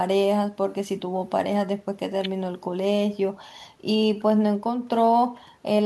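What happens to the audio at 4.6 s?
Nothing goes wrong at 4.6 s: the speech carries on cleanly through that moment, with no dropout, click, distortion or other audible fault.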